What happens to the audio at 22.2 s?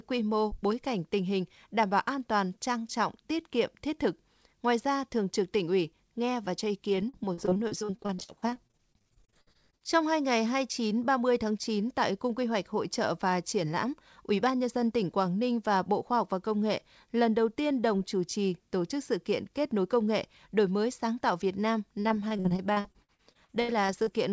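Repeated packet loss runs from 22.01 to 24.08 s; gaps up to 81 ms are filled by extending the last sound, leaving choppy speech with pieces missing.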